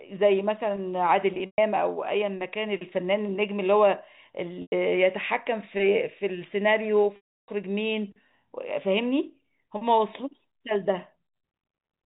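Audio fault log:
1.34–1.58 s, 4.62–4.72 s, 7.16–7.48 s: packet loss with pitch repetition. The last pitch period loops into a brief buzzy hold that fades to silence over about 50 ms in the longer gaps, rather than cutting off cleanly.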